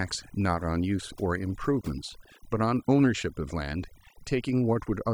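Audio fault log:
Throughout: overdone noise removal. The noise reduction ran far too aggressively, pulling individual frequency bands down or out whenever they came close to its noise estimate, and quieter parts of the speech went with them. The background drops and breaks up into twinkling specks.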